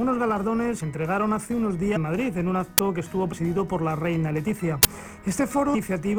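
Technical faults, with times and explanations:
0.79 s, 1.95 s, 3.32–3.34 s, 5.74 s: compressed frames skipped. The audio jumps ahead by about 200, 300, 70 and 400 ms, consistent with dropped runs of roughly 23 ms frames.
2.78 s, 4.83 s: uninitialised buffer. Blocks of 10 ms and 20 ms were played before audio was written into them, so leftover memory became samples. Each is heard as a short, loud crack.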